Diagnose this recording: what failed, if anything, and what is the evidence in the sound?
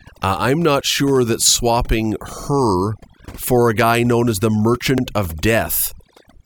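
Overdone noise removal runs through the whole clip, a call-processing fault. The background drops and breaks up into twinkling specks. Bins near the noise estimate were gated off, so a spectrogram shows a speckled, holed floor and ragged word edges.

Overlapping chunks, a buffer or processing-stage fault, cause stutters at 2.43 s, after "not sure that swapping", and at 4.98 s, after "guy known as the". Each 2.5 s chunk starts 50 ms early, so that slice plays twice. A waveform shows a duplicated 50 ms segment at each join.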